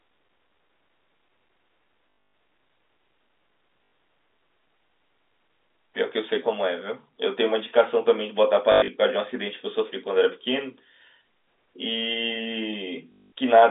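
Lost packets at 2.1 to 2.34 s, 3.84 to 3.92 s, 8.72 to 8.88 s and 13.12 to 13.32 s were filled by replaying the last one: packet loss with last packet repeated. The repeats, which fit 20 ms packets, buzz near 50 Hz, giving short robotic stutters.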